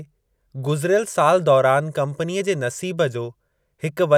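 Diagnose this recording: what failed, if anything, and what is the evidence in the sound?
Nothing failed, and the sound gives no evidence of a fault at any stage of the recording chain.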